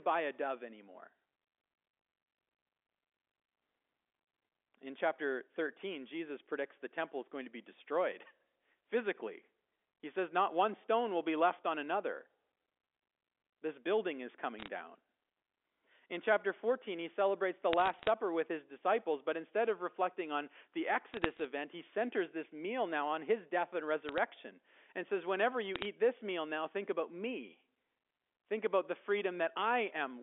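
Bit errors on a digital phone line produce five bursts of crackle: 14.59 to 14.68 s, 17.73 to 18.10 s (after "he celebrates the", before "with his disciples but"), 21.14 to 21.44 s, 24.09 to 24.18 s (after "on his death and"), and 25.76 to 25.86 s (before "this meal now think"). Each flipped bit corrupts a single mu-law sample. Sign or high-order hits give sharp ticks over intact speech, at an error rate of a fraction of a percent.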